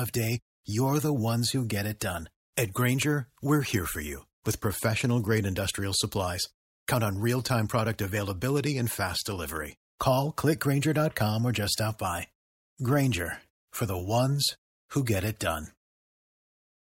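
A brief hiss smears in just ahead of sharp speech attacks at 1.99 s, 15.06 s and 15.40 s, lasting about 18, 15 and 11 ms and rising about 13 to 14 dB above the quiet before each onset, so the attacks sound softened. This is pre-echo. The codec spread quantisation noise sized for the loud attack across its whole transform block, and the smearing fits long blocks of about 26 ms with no switch to short blocks at the transients.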